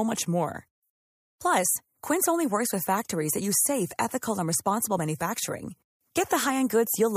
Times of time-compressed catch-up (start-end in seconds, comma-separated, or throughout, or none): none